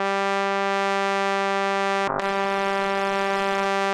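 From 2.09 s to 3.73 s a call bitrate drop makes the music coarse and watery, its highs cut off, which fits the encoder falling from about 96 to 14 kbps. Unlike packet loss, nothing drops out; quality degrades continuously for about 1.6 s.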